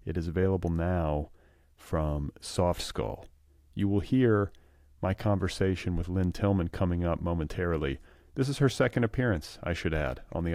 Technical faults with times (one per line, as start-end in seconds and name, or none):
none